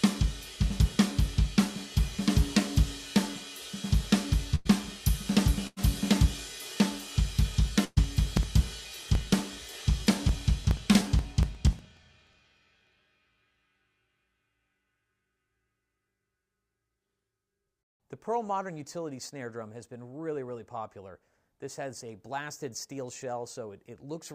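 At 4.55–4.67 s, 5.67–5.79 s and 7.85–7.98 s there are bursts of packet loss. About 100, 100 and 120 ms of audio went missing. The receiver stretched the last sound, fading it as a held buzz or hiss, then jumped ahead. These are isolated, not evenly spaced.

From 8.37 to 12.99 s, periodic USB or driver dropouts skip roughly 4 ms every 0.06 s, around seventy times in all. The result is a steady ticking that follows the signal. The gaps are far shorter and more regular than the packet-loss fills.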